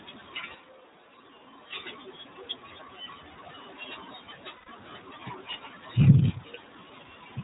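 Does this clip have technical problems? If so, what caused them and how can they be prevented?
Yes. The iLBC codec runs throughout: nothing above 4 kHz, with a rough, synthetic edge that fits iLBC in its 30 ms-frame mode at about 13 kbps. A wideband codec such as Opus would avoid this.

From 0.55 to 1.73 s the sound turns roomy and hollow, drops about 5 dB, and gains room noise roughly 30 dB below the speech. This is likely a switch to a distant microphone. Monitoring the close microphone's feed and keeping a backup recording of it would prevent this.

From 4.56 to 4.69 s there are lost iLBC frames. A held, buzzy vowel fills about 120 ms, which fits four lost 30 ms frames, and then clean decoding resumes. Forward error correction or a steadier network path would prevent this.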